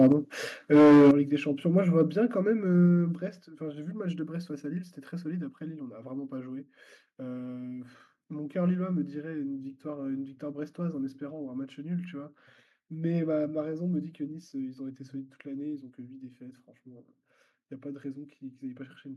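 The opening 0.00–0.12 s carries microphone overload: peaks about 2 dB past the converter's ceiling have their tops sheared flat, likely from an input volume set too high, giving a brief crackly edge. It returns far worse at 0.73–1.11 s, about 9 dB over with a large share of the waveform flattened, so the loudest syllables take on a harsh, crackling edge. At 2.00–2.02 s the level only just touches the limit. What separates this from ordinary loudness or a harsh recording is the distortion tracking the loudest moments and vanishing between them.

Each overload is followed by a microphone volume stepped down, likely the call software reacting to clipping by lowering the input volume in one jump: about 3 dB at 0.12 s, about 9 dB at 1.11 s, about 3 dB at 2.13 s, and about 5 dB at 3.15 s. Sound and background drop together instantly and stay lower, with no added distortion. That sets it apart from a compressor, which dips and then recovers, and from a gradual fade.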